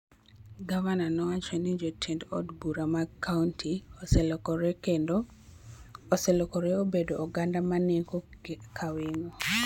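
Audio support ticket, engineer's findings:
No audio fault found in this speech clip; no findings to add to the ticket.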